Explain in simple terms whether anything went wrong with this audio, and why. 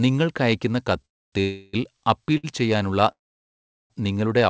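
The sound stops three times in a call audio freeze: at 1.05 to 1.34 s, 1.40 to 1.75 s, and 3.11 to 3.92 s. The first and last go almost silent. The middle one holds a fading buzz. The likely cause is delayed packets. Each time, the audio resumes where it left off, so nothing is lost. It just arrives late.

At 2.37 s there is a short stall from a late packet. One sound is stretched for about 60 ms with a slight buzz, then continues normally. The call codec also leaves nothing above 8 kHz.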